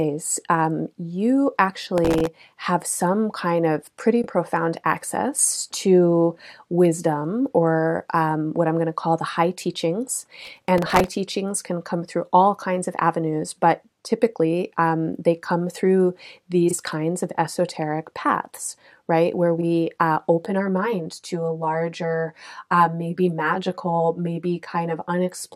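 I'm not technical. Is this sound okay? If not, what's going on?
No. Three separate problems can be heard.

Processor overload crackle, from 1.98 to 2.27 s (between "um you" and "have some kind of") and from 10.45 to 11.12 s. The computer fell behind, and a few dozen tiny chunks of audio, about 1.5 ms each, weren't ready in time. Old scraps replayed in their place, which sounds like gritty crackling.

Frames out of order, at 4.21 s (after "some kind of pretty", before "profound access to wisdom"), 16.68 s (after "um they come through", before "kinds of esoteric paths") and 19.58 s. Two neighbouring slices of about 23 ms each played swapped, giving a brief garbled flutter.

Channel delay (comb filtering), from 20.45 s to the end. One side runs roughly 10 ms late, and when the two sides are combined, certain evenly spaced pitches, starting near 50 Hz, cancel out. The sound turns hollow and phasey.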